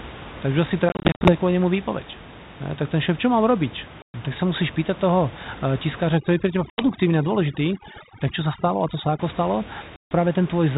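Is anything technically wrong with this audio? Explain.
Yes. There are two kinds of fault.

Packet loss on an ADPCM call: the speech drops into hard-edged silent holes, then comes back slightly distorted, settling within a few tens of milliseconds. This happens from 0.89 to 1.3 s, just before "kvôli nemu", as about 200 ms of gaps scattered over 360 ms with runs of up to 50 ms. It happens again at 4.02 to 4.2 s (about 120 ms lost), right after "šéf čo mám robiť". The last two are at 6.7 to 6.85 s (80 ms) and 9.96 to 10.12 s (150 ms). Missing packets were filled with silence, so the decoder's adaptive predictor and step size drifted away from the sender's and needed a moment to realign. The codec itself sounds like G.726, with the light coding noise of a 32 kbit/s link.

Overdone noise removal: from 6.12 to 9.19 s, ending just before "ako stalo", the background drops away and breaks up into twinkling specks. 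The noise reducer was set too aggressively, so it cut individual frequency bands whenever they came close to its noise estimate and removed quieter parts of the speech along with the noise. The room noise it was attacking sits only about 17 dB below the speech.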